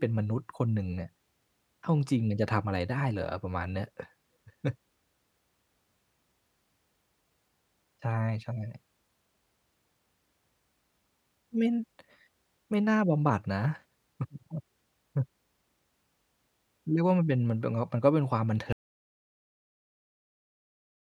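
At 18.73 s the speech stops abruptly, mid-flow, and the clip runs on in total silence to the end, about 2.4 s later. There is no fade and no room tone underneath; the level drops straight to silence and stays there. This is an audio dropout to silence, most likely caused by the input being lost, through a disconnected device, a broken link or an accidental mute, while the recorder kept writing empty samples.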